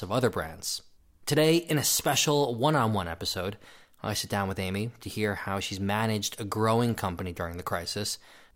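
No technical faults can be heard anywhere in the speech recording, and the signal holds steady throughout.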